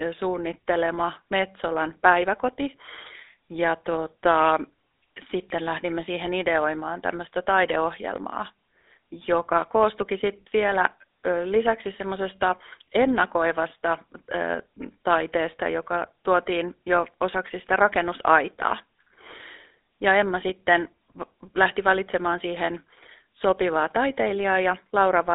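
GSM full-rate codec, throughout: speech confined to 300 Hz to 3.7 kHz, rebuilt from pulse-driven vocal-tract modelling, giving plainly buzzy, gravelly roughness that fits 13 kbps coding.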